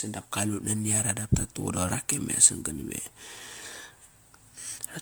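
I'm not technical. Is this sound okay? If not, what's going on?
No. Throughout the speech there's generation loss: a swirly, hollow, smeared quality with blurred consonant starts, likely from being saved as MP3 about seven times over. Unlike a single poor-quality save, the treble isn't cut off. Instead, the damage builds in layers.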